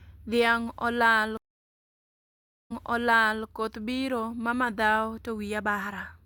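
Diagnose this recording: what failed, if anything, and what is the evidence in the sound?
The failure is at the network stage, a stream reconnect in playback. The speech cuts out at 1.37 s. Silence then runs for about 1.33 s. When sound returns, it repeats material from roughly 0.74 s earlier, so the same stretch is heard twice. The event ends at 3.45 s. The connection dropped and the player went quiet. It then reconnected and started a fresh decoder mid-stream. The server resent a burst of recent audio, which caused the backward jump.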